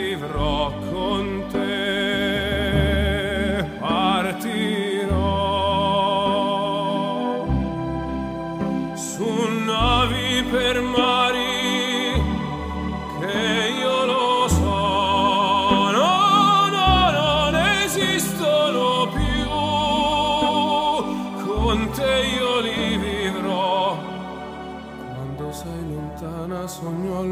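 No technical faults are audible.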